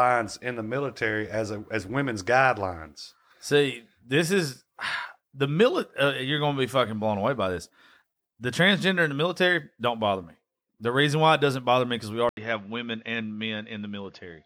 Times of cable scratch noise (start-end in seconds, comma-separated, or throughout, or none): none